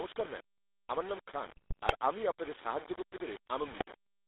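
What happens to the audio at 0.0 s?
From the very start the speech is gritty and grainy, with distortion riding along with it. That's likely low bit depth without dither, which fits about 5 bits with rounding, leaving grain only around 15 dB below the speech. On top of that, GSM full-rate codec coloring runs throughout, a buzzy, gravelly roughness from its pulse-driven vocal model, which fits 13 kbps, squeezed into a 300 Hz to 3.7 kHz phone band.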